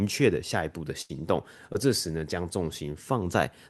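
At 1.01 s a burst of packet loss begins and runs to 1.11 s. Around 80 ms of the speech stream never arrived in time. The receiver covered the gap by extending the last sound it had for about 77 ms, letting it fade as the hole went on. That is heard as a held buzz or dull hiss that dies away. The speech then picks up further along, with a short stretch simply gone.

At 1.73 s comes a short concealed packet loss, lasting until 1.76 s. Here only about 20 ms went missing, and the receiver patched roughly 11 ms of it before blending back into real audio. The result is a brief smear or wobble rather than a dropout. Through both events the Opus call path keeps its normal coding texture, with the top end cut near 12 kHz, which fits a moderate call bitrate.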